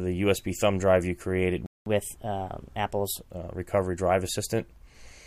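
The player most likely ran short of data or had its thread blocked at 1.66 s, causing a playback stall: the output drops to silence for 200 ms until 1.86 s, breaking the sound in mid-flow before it resumes from where it stopped. To recover the lost time, the player then applies catch-up at higher speed, resampling its backlog at 1.15 times normal rate from 1.86 s to 3.2 s, so the sound runs noticeably faster and sits about two semitones higher in pitch before settling back to normal speed and pitch.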